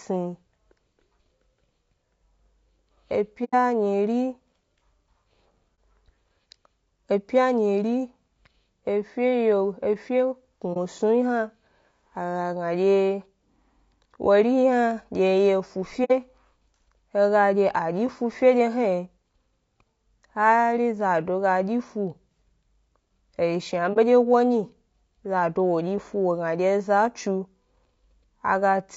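Low-delay AAC compression runs through the whole speech clip. The voice sounds plainly rough and grainy, with a noisy haze filling the gaps between harmonics and a top band that sounds thin and somewhat synthetic. This points to the likely cause being AAC-ELD, the short-frame codec used in video calls, running at a low rate that fits about 32 kbps. Its short frames cannot separate pitch harmonics cleanly, and too few bits are left to code the upper spectrum faithfully.

AAC frame loss with muting opens brief dips and soft-edged holes in the speech at 3.44 to 3.55 s, 5.75 to 5.78 s, 10.73 to 10.77 s, 16.04 to 16.11 s and 23.93 to 23.98 s. Each gap fades out and back in. The decoder received nothing for those stretches, zeroed their spectrum, and the overlapping windows smeared the edges. The longest hole, about 90 ms, fits three missing frames. The 60 ms gap fits two, and the shorter ones fit one each.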